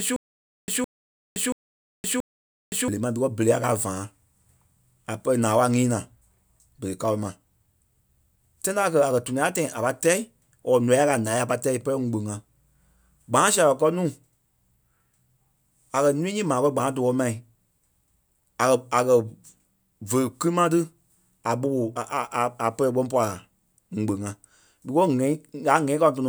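Speech clip that opens mid-stutter with silent gaps: from 0 to 2.88 s a 162 ms fragment repeats four times, each followed by about 520 ms of dead silence, likely a stalled stream retrying.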